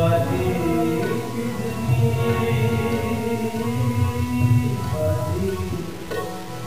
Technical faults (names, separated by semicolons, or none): low bit depth without dither